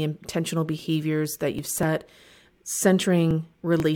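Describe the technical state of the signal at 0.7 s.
At 0.7 s the speech signal is intact, with no audible fault present at that moment.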